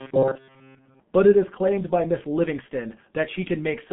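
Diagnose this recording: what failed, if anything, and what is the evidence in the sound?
The codec stage is at fault throughout. The sound is muffled and hoarse with smeared consonants, and nothing reaches above 3.7 kHz within a 150 Hz to 3.4 kHz line band. This fits G.723.1 at about 6.3 kbit/s, whose coarse 30 ms frames and slow model updates cause heavy damage.

From 0.01 to 1.00 s the sound becomes a rigid metallic buzz at 133 Hz, the robotic sound from repeated short buffers. The likely cause is buffer underrun. The fill repeats a segment of about 7.5 ms, replacing most of the real audio and imposing that fixed pitch.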